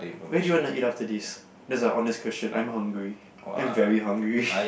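Speech recording, with no technical fault to report. Nothing in the audio points to a problem at any moment.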